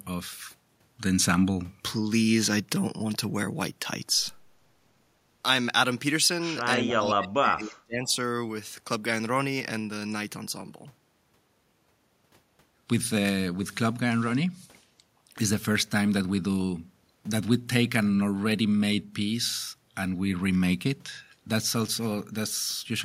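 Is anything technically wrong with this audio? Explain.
Yes. Speech suppressed in double talk, 6.77 to 8.15 s: with both sides talking at once, an echo canceller likely could not separate this voice from the loudspeaker echo and turned both down. The speech drops sharply, by roughly 35 dB at its deepest, for about a second and a half.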